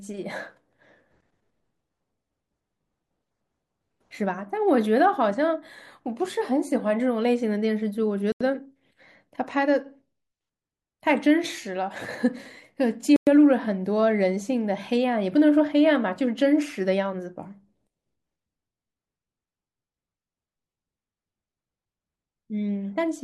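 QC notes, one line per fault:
8.32–8.41 s and 13.16–13.27 s, block of digital silence: the speech drops to silence for about 85 ms and then 108 ms, with no fade in or out, so each is heard as a short hole. The first gap's length fits a 4096-sample buffer that was not filled in time. On the waveform there are flat lines with abrupt edges; on the spectrogram, blank vertical bands.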